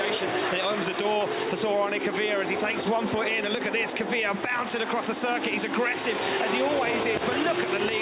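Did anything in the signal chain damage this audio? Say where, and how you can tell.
No, nothing stood out on listening that would point to any stage of the signal chain having damaged this audio.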